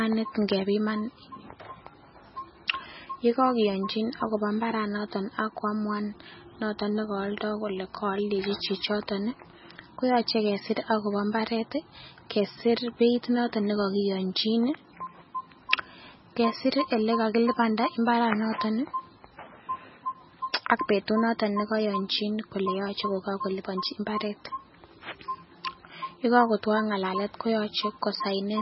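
MP3 compression runs through the whole recording, heavy enough to point to a very low bitrate of around 16 kbps. Nothing survives above 5.6 kHz, so the speech sounds dull and boxed-in. Short of bits, the encoder is likely discarding weak frequency lines that drop in and out between frames, leaving a watery, swirling texture on the speech, metallic chirping on s sounds, and consonant attacks that smear rather than land crisply.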